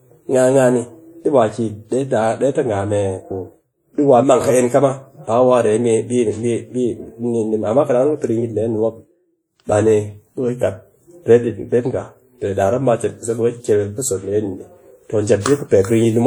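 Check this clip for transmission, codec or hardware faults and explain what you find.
One codec fault runs through the whole clip. The speech was likely passed through WMA compression, and the damage fits a first-generation WMA encoder at a low bitrate of about 48 kbps. Its long transform blocks smear quantisation noise over tens of milliseconds, so the speech rings and sounds washy, with a hiss that swells and fades with the speech. Content still reaches about 20.1 kHz.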